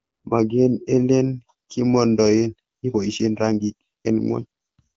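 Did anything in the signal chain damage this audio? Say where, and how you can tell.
Yes. A time-stretched section runs from 2.41 s to the end: the speech suddenly rushes at about 1.39 times its earlier pace, yet the pitch stays put. This is likely software squeezing the audio by dropping short pieces.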